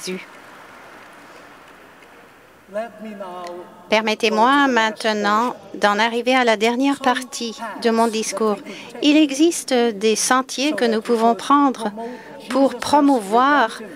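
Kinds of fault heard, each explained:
No technical faults heard.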